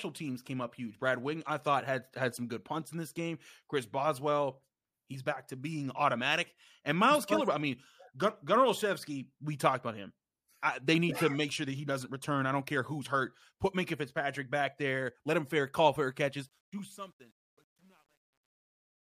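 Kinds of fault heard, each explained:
Truncation distortion on a fade: as the speech fades out over the last couple of seconds, the level drops toward the smallest step a coarse fixed-point stage can hold, which fits about a 10-bit path with no dither. The waveform collapses into a few square steps, so the tail turns gritty from 16.39 s and is at its worst from 16.97 s to 19.04 s. Unlike a noise gate chopping low-level sound, the harshness tracks the falling fade itself.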